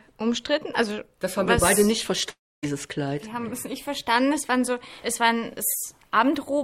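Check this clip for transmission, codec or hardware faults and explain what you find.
One transmission fault is audible. A long network dropout at 2.29–2.65 s likely starved the receiver. It stretches the last sound into a fading buzz, then near-silence, and resumes with about 0.34 s missing.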